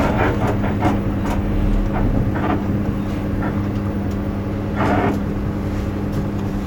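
Nothing goes wrong here; the sound just runs its course without a single hiccup worth pointing out.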